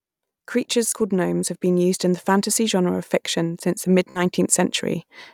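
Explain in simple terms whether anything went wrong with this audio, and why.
At 0.89 s and again at 4.11 s, the speech briefly buzzes as a tiny slice repeats like a stutter, then jumps ahead. This is Bluetooth stutter: wireless data arrived late or went missing, so the receiver replayed its last bit, losing about 30 and 46 ms.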